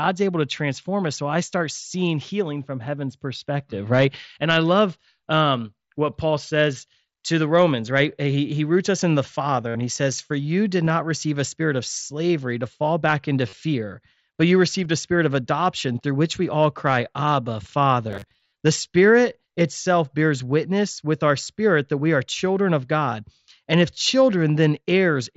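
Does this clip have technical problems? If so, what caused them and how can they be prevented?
Yes. Concealed Bluetooth headset packet loss occurs at 9.68–9.75 s, after "roots us in the", at 10.85–10.90 s, at 13.49–13.53 s, after "to fall back into", at 14.84 s, between "but you" and "a spirit of adoption", and at 21.45 s. Lost headset packets were patched by repeating recent waveform. The longest gap, about 68 ms, buzzes, then warbles before "he says". Keeping the headset close to the phone, away from Wi-Fi congestion, prevents this.

From 18.11 to 18.53 s the sound turns into a rigid, metallic buzz at 100 Hz. That is robotic sound from repeated short buffers. Roughly half the audio there is a repeat. The likely cause is late-arriving audio padded by looping a 10 ms chunk. A larger playback buffer or a less loaded system prevents it.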